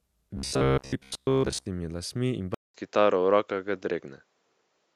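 From 0.37 to 1.66 s the speech becomes a rigid, metallic buzz pitched at 66.7 Hz that only loosely tracks the words, ending just before "lasmi in". This is robotic sound from repeated short buffers, most likely a 15 ms block replayed while most of the real audio was skipped.

At 2.54 s, after "lasmi in", a 200 ms silence gives way to a duller, narrower sound that runs to the end, with a modest level shift and a faint new noise floor. The input was likely switched to a poorer device.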